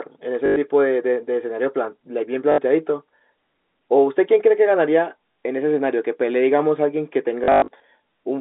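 Packet loss with the last packet repeated hits at 0.46–0.56 s, 2.52–2.58 s, 5.32–5.36 s and, scattered, 7.44–7.80 s. It produces buzzing robotic stutters at about 50 Hz, which fits 20 ms packets, rather than silent gaps.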